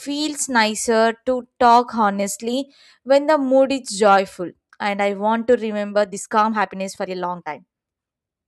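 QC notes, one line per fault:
5.93–8.47 s, time-stretched section: speech abruptly runs 1.41 times faster at unchanged pitch, sounding rushed, likely from software dropping short pieces to shorten it.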